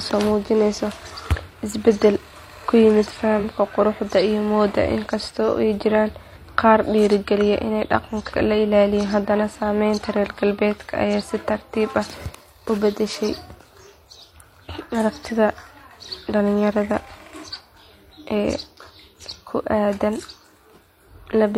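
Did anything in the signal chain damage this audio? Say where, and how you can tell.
Yes, at the codec. A corrupt frame decoded at 3.38 to 3.40 s gives a brief artefact peaking near -15 dBFS. On a spectrogram it is a one-frame vertical smear of energy at the wrong frequencies.

Compressed frames skipped at 6.32 to 6.38 s cause the speech to jump ahead by roughly 100 ms. The spectrogram shows formant tracks broken mid-contour.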